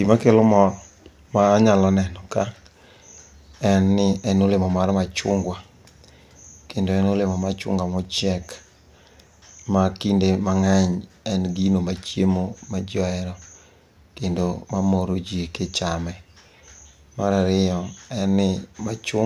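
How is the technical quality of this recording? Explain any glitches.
Nothing stood out on listening to this recording.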